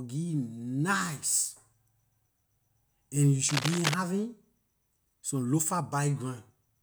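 From 3.47 to 3.94 s a burst of cable scratch noise rasps over the speech, fairly loud against it. Likely a worn connector or lead being moved, its contact flickering; the dense, uneven rustle sets it apart from isolated clicks or a clean dropout.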